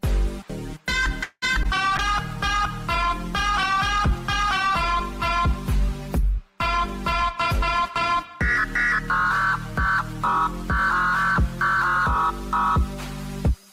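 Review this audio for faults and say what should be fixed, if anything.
Repeated packet loss (robotic sound) hits between 1.23 and 1.66 s. Packets went missing three times in quick succession. The receiver filled about 208 ms by stretching the last sound it had, and left about 60 ms empty. The longest hole ran 187 ms, so nearly half of that span is concealment. The result is a choppy burst with pieces of sound missing. Forward error correction and redundant packets on the sending side would cover losses like these.

A call bitrate drop runs from 1.99 to 8.07 s. The bandwidth estimate fell and the encoder was pushed from 64 kbps down to 25 kbps, staying at the bottom for about 4.5 s. With so few bits, Opus codes coarsely and trims the upper frequencies, so the sound turns rough, watery and dull through that stretch and brightens again as the rate climbs back. A smoother bandwidth estimator with a higher floor would avoid such a deep cut.

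A jitter buffer speed-up starts at 7.22 s and continues to the end, overlapping the tail of the bitrate drop. The buffer had built up more delay than its target, so the receiver kept removing short pitch-period slices to catch up, roughly a tenth of a second in total. Playback runs about 2% fast at unchanged pitch. Adapting the buffer target more gradually, so that excess delay is drained more gently, would keep the pace steady.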